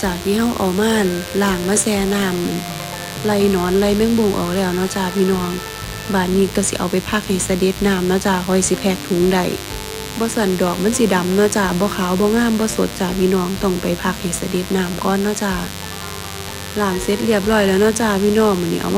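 From start to finish, a mains buzz sits under the sound, roughly 15 dB below it. Sharp switching spikes, twice per 50 Hz cycle, leak in through a dimmer, rectifier or poor shielding, spreading harmonics into the kilohertz range and producing a steady, raspy buzz.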